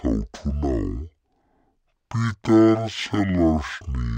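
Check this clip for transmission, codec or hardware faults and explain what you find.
One fault runs through the whole clip: stereo read as mono. From start to finish the speech plays at half speed, a full octave low. The file holds interleaved left and right samples. Here they are taken one after another as a single channel. Each stereo frame becomes two mono samples, so everything stretches to twice its length and drops 12 semitones. Voices sound slow, deep and sluggish. A fainter mirrored copy of the sound also sits in the upper half of the spectrum.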